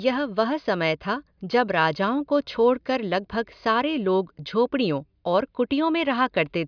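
No technical faults can be heard anywhere in this speech recording. There is no event to mark at any point, so no times are given here.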